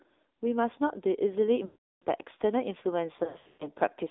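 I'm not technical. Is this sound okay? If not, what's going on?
No. The whole clip went through an AMR narrowband mobile codec, the old phone speech format. Only about 300 Hz to 3.7 kHz survives, so voices sound thin, buzzy and synthetic.

There are also lost AMR speech frames. From 1.66 to 2.04 s the decoder fills the gap by stretching the last sound and fading it out. From 3.24 to 3.67 s shorter dropouts cause brief warbles and dips.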